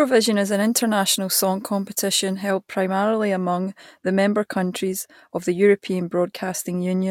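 Pre-emphasis left on affects this speech clip from 0.5 to 2.5 s. During that stretch the treble was lifted before storage or transmission, and the matching de-emphasis cut was never applied on playback. Highs stand about 8 dB above the 1 kHz level at 10 kHz, which fits the 50/15 µs CD emphasis curve. The result is a thin, overly bright and sibilant sound for those two seconds.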